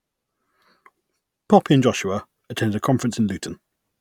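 From the start to about 1.6 s the speech sounds slightly dull at the very top, from channel delay (comb filtering): one channel runs about a sample late, cancelling near 20 kHz when summed to mono.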